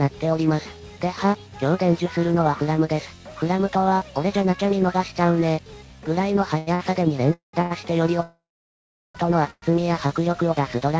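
At 6.58–6.69 s and 6.75–6.81 s, short stalls from a late packet hold the sound for about 89 ms and 45 ms with a slight buzz or dip, then resume without loss. At 7.33–7.55 s, a call audio freeze turns the sound into a fading buzz or hiss and then 140 ms of silence, likely because packets were delayed and the jitter buffer ran dry. At 7.61–7.72 s, another late-packet stall stretches the sound by about 91 ms. Further freezes at 8.22–9.17 s, including 760 ms of silence, and at 9.51–9.64 s insert gaps in the same way. From 9.71 to 10.09 s, a jitter buffer slow-down repeats pitch periods to rebuild its reserve, so the sound plays at 91% speed at unchanged pitch and is drawn out by 44 ms. Throughout, the call path cuts everything above 8 kHz, which fits G.722 wideband coding.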